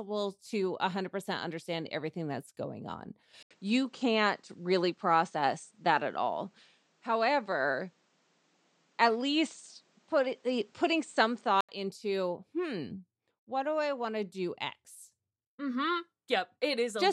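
At 3.43 s, after "everything that's going on", an 80 ms waveform gap precedes duller sound, likely an input switched to a poorer device. The spectrogram is empty above 8.9 kHz until 11.69 s, before "into hmm what do".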